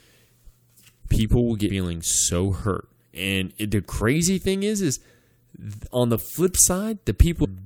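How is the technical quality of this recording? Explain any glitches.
There is one glitch, right at the end of the speech. At 7.43 s the audio lurches forward with a short smeared blip rather than a sharp click, and roughly a fifth of a second of sound is simply gone. These are compressed frames skipped: about seven whole frames of the encoded stream were never played, either missing from the file or rejected by the decoder as damaged. The jump is a multiple of the 26.1 ms frame length. Because neighbouring frames overlap, the join blurs instead of snapping.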